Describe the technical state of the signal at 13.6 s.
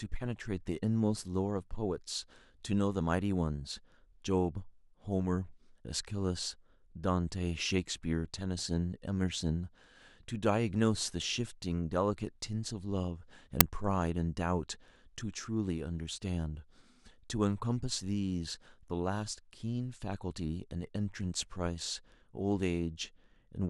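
At 13.61 s there is an uninitialised buffer. A 5 ms block was sent to playback before any audio had been written into it. Leftover memory contents came out as samples. The result is a sharp, loud crack cutting through the speech.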